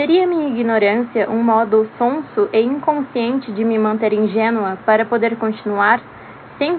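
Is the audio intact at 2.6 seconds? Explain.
Yes, at 2.6 seconds the audio plays through intact, with no dropout, click, distortion or other fault at that moment.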